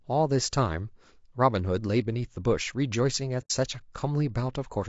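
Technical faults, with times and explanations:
Throughout: low-delay AAC compression, likely AAC-ELD at a low bitrate around 32 kbps; at this bitrate noise fills in between the harmonics, so speech sounds rough and grainy.
3.41 to 3.51 s: AAC frame loss with muting, about 90 ms gone, which fits three lost frames zeroed out; overlapping windows fade it, leaving a soft hole.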